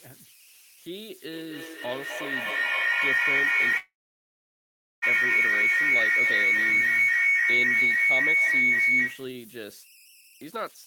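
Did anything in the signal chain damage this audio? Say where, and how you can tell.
Yes. The converter, running without dither, falls into idle tones throughout: a whistle near 3 kHz sits about 15 dB below the speech, grainy under quiet passages.

An acoustic loop between two devices on the call produces feedback howl from 1.31 to 9.46 s, building near 2 kHz to about 13 dB above speech, with a loop delay of roughly 0.3 s.

A call audio freeze runs from 3.77 to 5.04 s, likely caused by network delay draining the jitter buffer. The last sound is held and fades, then falls silent for 1.12 s, and resumes with nothing lost but 1.25 s later.

A jitter buffer speed-up from 10.21 to 10.87 s trims short pitch-period slices to shed the backlog. Speech runs at 150% speed with unchanged pitch, dropping roughly a third of a second.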